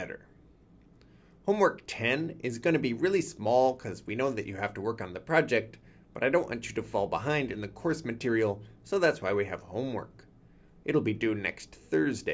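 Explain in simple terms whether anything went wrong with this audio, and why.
Nothing went wrong here: the signal comes through steady and intact, with no dropouts, distortion or glitches to be heard anywhere in the recording.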